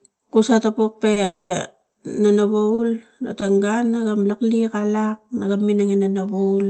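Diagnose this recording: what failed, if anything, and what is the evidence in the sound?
The speech has three short stalls from late packets, in the network and jitter buffer stage, at 1.13–1.18 s, 1.92–1.96 s and 2.74–2.80 s. Each holds the preceding sound for 30, 20 and 40 ms with a faint buzz, then resumes at the same point, losing nothing.

A call audio freeze runs from 1.24 to 1.52 s. The last sound is extended for 260 ms as a fading buzz, dropping briefly to silence before the speech resumes unbroken. The likely cause is packets delayed in transit, emptying the jitter buffer. The band-limited call sound, topping out near 8 kHz, fits an Opus stream at around 24 kbps.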